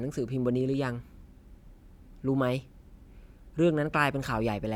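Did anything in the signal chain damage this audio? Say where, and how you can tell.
No, nothing in the signal chain damaged this speech recording. Listening through it, I hear no sign of a problem at any stage between capture and playback.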